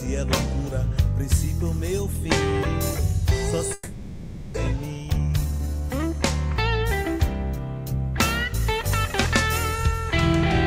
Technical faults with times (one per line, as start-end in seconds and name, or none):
3.73-4.58 long network dropout
4.67-6.00 jitter buffer speed-up